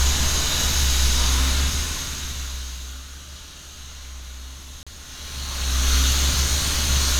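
At 4.83 s the sound drops to silence for about 36 ms and then resumes, a Bluetooth stall. The likely cause is radio interference holding up packets, so the headphones' buffer emptied and playback paused briefly until the delayed audio arrived and output continued.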